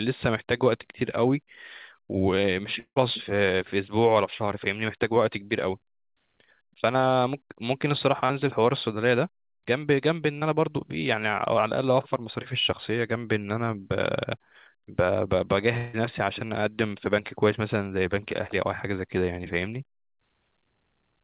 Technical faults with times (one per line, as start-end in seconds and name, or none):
2.80-2.98 long network dropout
8.26-8.31 short concealed packet loss
10.39-10.43 short concealed packet loss
15.77-15.95 long network dropout